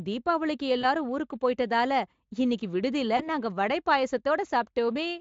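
VoIP packet loss concealed by the speech codec occurs at 0.81–0.85 s and again at 3.17–3.29 s, just before "நாங்க வடை". Each gap points to a single lost 20 ms frame. The decoder fills it by extending its last pitch and filter at falling gain. The speech smears into a brief buzzy tone or coloured noise that fades, and because the decoder builds each frame on the previous one, it stays weak past the gap. Around these, Speex coding is faintly audible.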